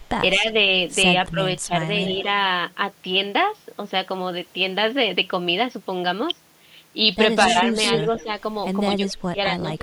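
Speech suppressed in double talk affects this speech recording at 0.36 to 0.54 s, 1.31 to 1.7 s, 7.77 to 8.29 s and 8.97 to 9.82 s. The voice dips by about 5 dB in the first and third, about 15 dB in the second, and up to about 30 dB in the last, where roughly half a second is pulled down. The likely cause is an echo canceller that heard both sides talking at once, could not tell the talker from the loudspeaker echo, and attenuated everything. Echo leak appears at 2.04 to 2.13 s as a faint copy about 20 dB below the speech, and again at 7.41 to 8.23 s, where the copy is only about 5 dB down. Both copies trail the voice by 237 ms, which points to a single echo path. It is likely that a far-end loudspeaker's sound reached its microphone and was not fully cancelled, so part of it was sent back.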